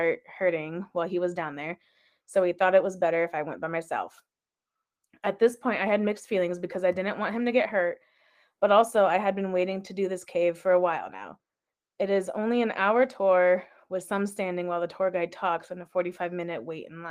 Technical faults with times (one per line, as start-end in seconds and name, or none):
none